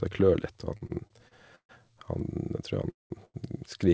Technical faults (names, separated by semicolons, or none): repeated stalls (stutter); call audio freeze; short stall from a late packet